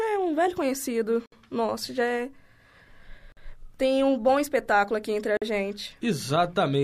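Short dropouts open in the continuous speech at 1.26 to 1.32 s (62 ms), 3.32 to 3.37 s and 5.37 to 5.42 s (48 ms each), roughly every 2 s, with smeared edges. These are gaps at joins of encoded pieces: each separately encoded segment kept its start delay and final-frame padding.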